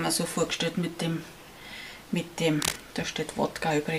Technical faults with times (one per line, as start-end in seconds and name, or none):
2.62-2.80 cable scratch noise